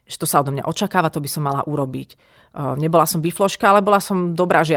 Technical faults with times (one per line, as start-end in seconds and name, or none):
1.47-1.53 lost packet rebuilt from error correction
3.21-3.23 lost packet rebuilt from error correction